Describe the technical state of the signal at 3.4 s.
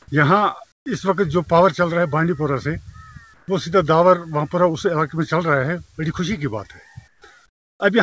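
At 3.4 s, from 3.34 to 3.48 s, the real background gives way to comfort noise in place of the background, likely from discontinuous transmission. For those 140 ms, the sender's detector treats the quiet as silence and stops sending. The receiver fills the gap with synthetic noise shaped like the background. The fill is steady and featureless, about 3 dB quieter, and loses the background's detail. As everywhere in the clip, nothing is present above 8 kHz.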